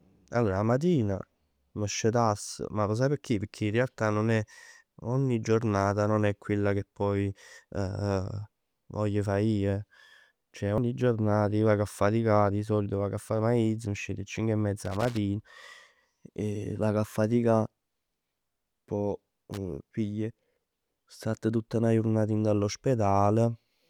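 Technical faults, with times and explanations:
9.26 s and 10.78 s, dropped buffer (overrun): each is a jump where the speech skips forward with no gap of silence. The first skip is short, around 20 ms, and the second is longer, around 70 ms. This is likely an overrun: the recording software fell behind, the hardware overwrote samples it hadn't yet collected, and the audio on either side was spliced together directly.
14.85–15.17 s and 19.53–19.58 s, loose connector crackle: irregular bursts of scratchy crackle, a third of a second at first and then a brief spit later. A worn or dirty contact in the signal path is making and breaking rapidly as it shifts, chopping the signal on and off. Any DC on the line turns each break into a small pop, which builds up into a rough crackle.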